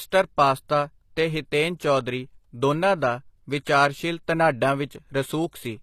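Speech clip with plainly audible HE-AAC compression throughout, likely from encoding at around 24 kbps. The treble above the core band is rebuilt by replication, sounding gritty and metallic, with nothing above 14.9 kHz.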